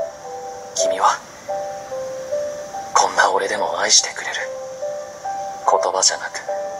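No technical faults are audible.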